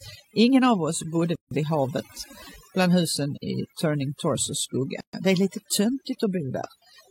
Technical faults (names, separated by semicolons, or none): overdone noise removal; gap at a join of encoded pieces